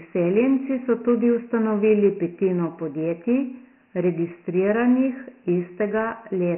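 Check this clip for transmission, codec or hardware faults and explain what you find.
The clip carries Dialogic VOX ADPCM throughout: coarse 4-bit adaptive coding leaves gritty hiss trailing the speech, with nothing above 2.9 kHz, which fits 6,000-sample-per-second storage.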